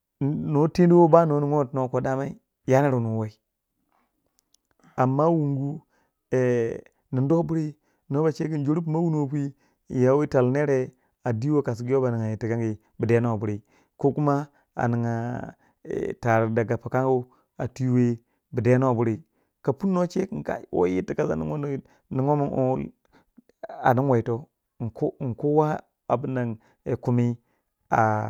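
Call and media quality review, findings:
No faults found in the speech recording. Nothing to log against any component, and no follow-up is needed.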